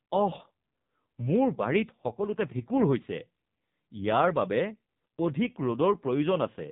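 Speech heard through the AMR narrowband mobile codec from start to finish. Nothing reaches above about 3.8 kHz, and the voice has the buzzy, synthetic grain of a vocal-tract model fed by sparse pulses. The heavy damage points to one of AMR-NB's lowest modes, around 5.9 kbps. A simple low-pass filter or telephone band limit would only dull the sound. Here the voice itself is rebuilt coarsely in 20 ms frames.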